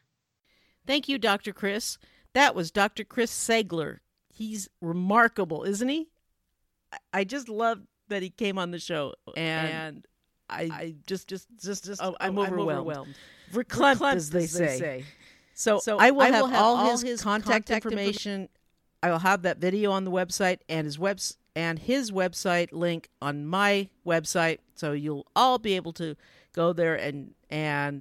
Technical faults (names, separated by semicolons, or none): doubled audio track